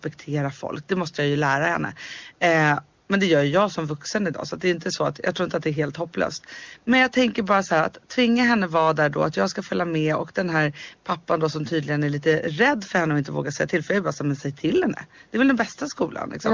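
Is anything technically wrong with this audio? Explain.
No, nothing here sounds wrong: it's speech carried over a call's microphone processing and the AMR wideband (HD Voice) codec at a quality that fits its top 23.85 kbit/s mode, with nothing above 8 kHz, just as that chain normally leaves it.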